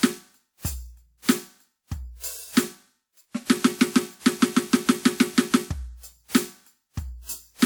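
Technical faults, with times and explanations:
Throughout: generation loss, likely about three WMA re-encodes stacking quantisation noise; swirly, hollow, smeared attacks, with flickering spectrogram holes under a 20.1 kHz ceiling.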